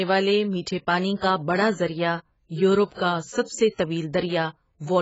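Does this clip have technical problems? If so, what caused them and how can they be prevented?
Yes. The speech is dull and band-limited throughout, with nothing above about 7.7 kHz. Sibilants sound fizzy and smeared. This is likely AAC compression at a very low bitrate, around 16 kbps. The encoder discards high bands and coarsely quantises the rest. Encode at a higher bitrate to prevent it.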